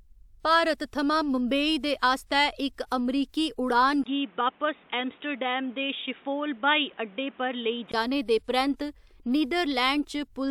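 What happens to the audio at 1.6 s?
Nothing goes wrong at 1.6 s; the speech carries on intact through that moment.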